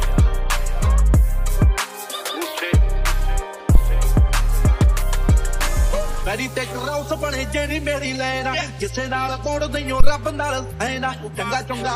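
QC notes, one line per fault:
3.75 to 3.81 s: phantom power thump. A deep low-frequency thump lasting about 55 ms and peaking near -1 dBFS dies away within roughly 12 ms. Phantom power was switched on or off on a live input, and that voltage step passed through the coupling capacitors as a single bass pulse.
10.00 to 10.11 s: phantom power thump again, about 110 ms long with a slower 25 ms decay and the same peak near -1 dBFS.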